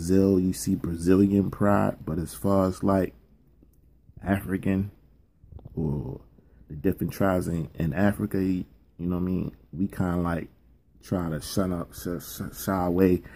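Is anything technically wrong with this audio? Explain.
No, nothing is technically wrong with this audio.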